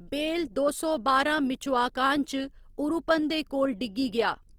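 Throughout the speech, the voice sounds rough and grainy, with a noisy sheen on tones, likely from Opus compression in its CELT mode at a rate that fits about 24 kbps. A spectrogram shows bands filled with speckled noise rather than holes, extending to 20.2 kHz.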